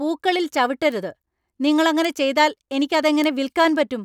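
Bit error spikes at 0.92, 2.05 and 3.24 s each come from a single flipped bit in one sample, which jumps by a power of two and snaps back. Each is a sharp, broadband tick over the speech, about -20 dBFS first, then about -8 dBFS.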